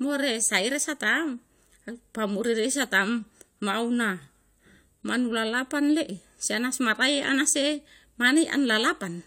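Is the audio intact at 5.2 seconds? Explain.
Yes, the speech at 5.2 seconds is intact, with no dropout, click, distortion or other fault at that moment.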